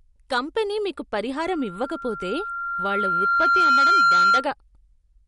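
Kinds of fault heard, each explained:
MP3 compression: Likely lossy MP3 coding at a low bitrate, heard throughout as plainly audible watery smearing, with nothing above 11.1 kHz.
Loudspeaker feedback squeal: After "కంపెనీ మీకు", a 1.4 kHz tone swells over about two seconds. It ends about 10 dB above the speech.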